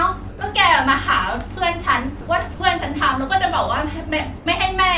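A voice detector likely judged the sound as background, so sound dropped by the voice detector gives way to steady comfort noise at 0.29–0.41, 2.21–2.27, 2.54–2.60 and 4.37–4.46 s.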